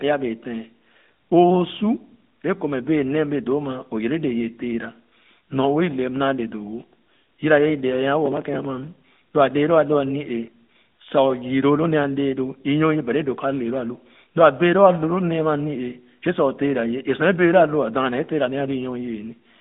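From start to finish the speech has gone through the AMR narrowband mobile codec, the old 2G/3G phone coder. It models the vocal tract and drives it with a few pulses per subframe, so the voice sounds plainly buzzy and synthetic, which fits a mid-rate mode around 10.2 kbps. The band is squeezed to roughly 150 Hz to 3.7 kHz, and nothing at all survives above 3.8 kHz, giving that boxy, telephone-line dullness.

From 8.26 to 8.65 s there's a gritty burst of processor overload crackle. The machine fell behind and kept missing its deadlines for tiny buffers, which sounds like blocks of about a millisecond and a half. Each missed block was simply skipped, not refilled, so around twenty small hard-edged gaps land one after another. Together they come across as a rough tearing texture over the audio that stops once the load eases.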